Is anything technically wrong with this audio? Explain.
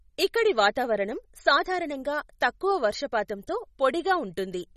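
Yes. Throughout the speech there is nothing above 13.9 kHz, and the sound has a watery, swirly quality with smeared consonant onsets, likely MP3 compression at a low bitrate, around 32 kbps. Short of bits, the encoder cut the treble and let weak frequency lines flicker between frames.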